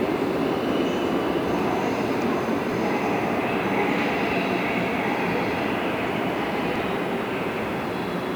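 At 2.69 to 2.74 s, there are chunks out of order. A block of about 23 ms arrives one chunk late and plays after the block that should follow it. Nothing is dropped, but the sequence is swapped, leaving three hard joins. It sounds like a brief jumbled stutter. The same fault recurs at 6.76 to 6.80 s, with the same chunk size and delay.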